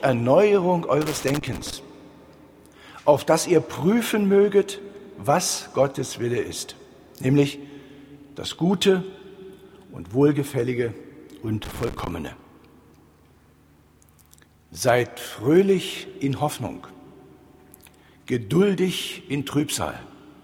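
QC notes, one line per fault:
1.01–1.73 s and 11.64–12.11 s, loose connector crackle: two irregular bursts of scratchy crackle, the first running about 0.7 s and the second about half a second. That's a worn or dirty contact somewhere in the chain shifting and flickering between connected and open, so the signal keeps getting chopped, and each make or break can kick out a little pop if there's any DC sitting on the line. Worth reseating or cleaning the plugs.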